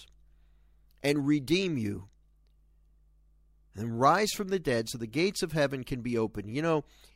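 Mains hum runs under the speech from start to finish: a steady low tone at 50 Hz with some low harmonics, sitting about 35 dB below the speech. It comes from power-line current leaking into the signal path through a ground loop or nearby transformer.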